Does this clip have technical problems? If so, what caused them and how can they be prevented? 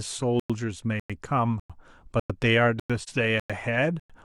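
Yes. The stream was delivered in half-second chunks with silence inserted at each join, so playback drops out for 100 ms at 0.40, 1.00, 1.60, 2.20, 2.80, 3.40 and 4.00 s, a regular gap between chunks. Concatenating chunks without padding and scheduling each one to start immediately would prevent this.

An AAC frame loss with muting occurred when a compressed frame went missing and the decoder zeroed its spectrum, leaving a brief dip from 3.00 to 3.09 s, consistent with one lost frame. Reliable transport or error concealment would prevent it.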